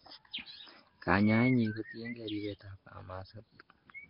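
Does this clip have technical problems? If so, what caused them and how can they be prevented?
Yes. Throughout, the speech sounds hissy, smeared and underwater, with nothing above 5.3 kHz, likely from heavy Nellymoser compression filling starved bands with noise at a rate that fits roughly 22 kbps. Record or transcode with a modern codec such as Opus at a higher bitrate.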